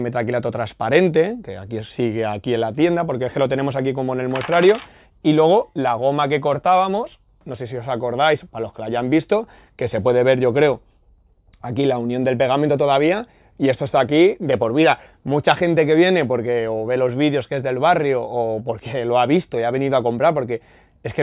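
No technical faults can be heard anywhere in this recording.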